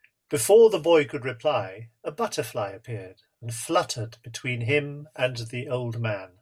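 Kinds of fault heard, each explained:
Nothing stood out as wrong on listening to this speech recording.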